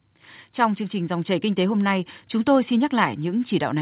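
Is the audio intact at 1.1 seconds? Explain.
No. At 1.1 seconds the sound is in the middle of an automatic gain rising event that runs from 0.9 to 1.84 s. The gain control judged the incoming level too low and pushed its gain up step by step, about 3 dB over roughly a second. Speech and background noise therefore swell together, a slow lift in loudness that settles just before "nay chúng tôi xin".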